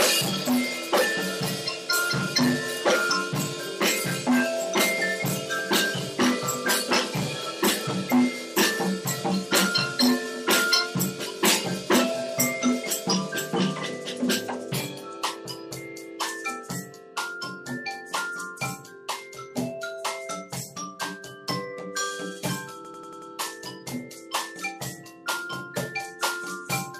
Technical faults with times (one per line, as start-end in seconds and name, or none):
22.85-23.31 system hang loop